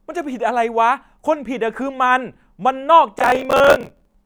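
From 3.19 s to 4.15 s, processor overload crackle rides on the speech. The processor could not finish each small audio buffer in time. Deadline after deadline was missed. Each miss held a fragment of old audio with hard edges. The grain of the repeats fits buffers of around 10 ms, and the density points to roughly fifty misses. The result is a gritty, tearing crackle laid over the voice. It stops once the load passes.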